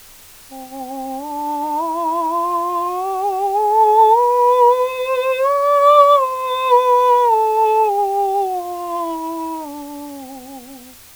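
From start to finish the music sits over a constant, even hiss: low bit depth with dither. The signal is quantised to 7 bits, with dither added before rounding, so the error turns into steady white noise about 25 dB below the music instead of distortion.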